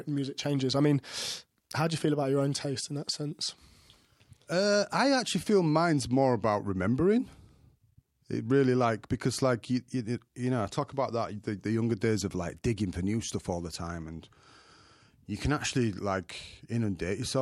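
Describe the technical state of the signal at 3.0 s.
At 3.0 s the speech signal is intact, with no technical fault audible at that moment.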